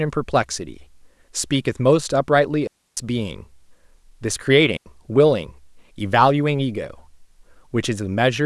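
A speech recording with two digital wireless dropouts. The first runs from 2.67 to 2.97 s, a gap of about 300 ms. The second runs from 4.77 to 4.86 s, about 90 ms. Each is a clean hole of near silence. There is no crackle or noise burst at either edge. The receiver lost too much data from the wireless link, so it muted the output with a very quick fade.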